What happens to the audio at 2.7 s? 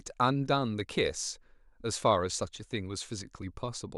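Nothing goes wrong at 2.7 s: the speech there carries on intact, with no dropout, click, distortion or other fault.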